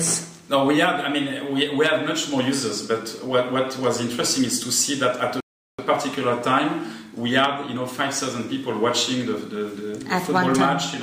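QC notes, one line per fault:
5.40–5.79 s: rebuffering stall. Playback halts into silence for 0.38 s when the buffer runs dry, then resumes exactly where it stopped, losing no audio.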